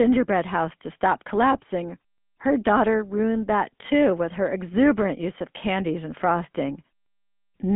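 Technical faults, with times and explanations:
Throughout: GSM full-rate codec. The speech sounds buzzy and gravelly. That fits a pulse-driven vocal-tract coder near 13 kbps. Nothing passes above 3.8 kHz.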